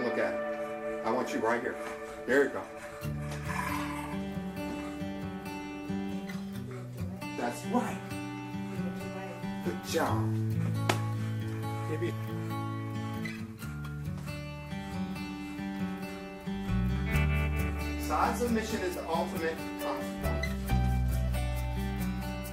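From 13.97 to 21.98 s, periodic USB or driver dropouts skip a sliver of audio every 2.0 s, causing regular ticks that show as thin vertical spectrogram lines.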